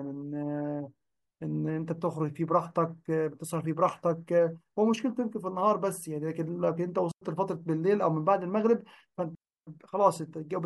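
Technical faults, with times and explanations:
7.11–7.22 s and 9.35–9.67 s, digital wireless dropout: the radio link lost too much data, so the receiver muted with a very quick fade, leaving clean holes of near silence in the speech, about 0.10 s and then 0.32 s long, with no noise burst on either side.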